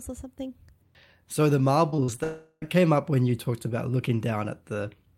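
Speech, and it runs into trouble just before the two-second mark. From 1.89 to 2.20 s there's repeated packet loss (robotic sound): four separate holes, the longest about 45 ms, each papered over by stretching the last bit of audio. That concealment covers roughly a third of that stretch and about 100 ms of real audio never makes it, so you get that choppy, robotic texture. Almost immediately after, from 2.24 to 2.64 s, a long network dropout is the likely cause of what you hear. About 380 ms goes missing outright. The receiver keeps smearing the last sound forward as a fading buzz, and that tails off into a brief silence of about 20 ms. The audio picks up again at "came up when you", with whatever sat in that gap simply gone.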